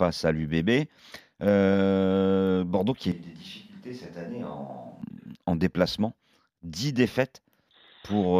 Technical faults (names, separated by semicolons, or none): switch to a distant microphone